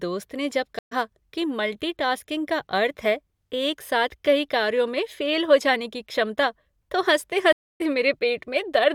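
The connection dropped twice, and each time a stream reconnect started a fresh decoder partway through the live speech. At 0.79 s, after "ने जब", the audio falls silent for 124 ms and comes back on "कि मल्टी टास्किंग का" around 70 ms later than where it stopped, so a small piece is skipped. At 7.53 s a 274 ms gap leaves a clear hole before the audio resumes at 7.81 s, roughly 150 ms further on.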